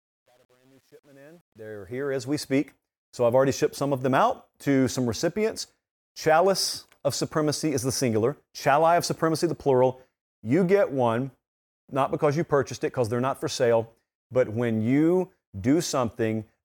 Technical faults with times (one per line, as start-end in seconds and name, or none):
0.00-2.42 truncation distortion on a fade